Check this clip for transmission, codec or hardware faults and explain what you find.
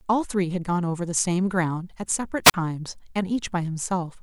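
There's one fault, a wireless microphone squelch dropout between 2.44 and 2.54 s. The radio link fades, you get a quick swell of hiss, then the receiver's squelch shuts the output for about 42 ms before the speech comes back.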